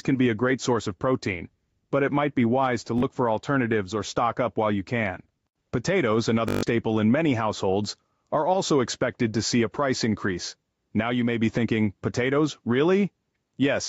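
Gain pumping runs through the whole clip. The level swings by about 5 dB. Loud and quiet passages sit closer together than they should, and the result sounds squashed. The likely cause is input gain set far too high for the microphone, with a fast limiter or compressor pulling the level down on every peak and then releasing it.

A Bluetooth stutter occurs from 2.98 to 3.03 s. Roughly 40 ms of audio goes missing, which fits about two lost packets. The receiver fills the gap by replaying its last short slice, so a brief buzz appears before the sound resumes further along, as though it had kept playing. A second, longer stutter follows from 6.48 to 6.63 s. It covers about 140 ms, which fits around seven lost packets, and the repeated slice becomes an audible machine-gun rattle before the audio jumps forward. Throughout, the band stops at 8 kHz, as expected from call microphone processing.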